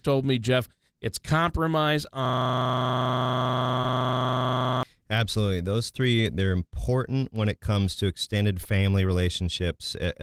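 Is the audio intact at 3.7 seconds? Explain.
No. A system hang loop runs from 2.25 to 4.83 s: the system froze while the audio hardware kept replaying one 40 ms stretch of its buffer, 64 times over, so the speech becomes a rough, mechanical buzz repeating at 25 Hz.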